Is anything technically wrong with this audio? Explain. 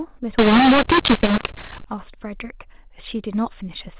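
Yes. From 0.39 to 1.84 s the speech turns harsh and gritty, loudness jumps unevenly, and the pauses fill with hiss. This is mu-law and A-law mixed up: mu-law telephone samples are decoded as A-law, so each level maps wrongly and near-silent samples land well above zero.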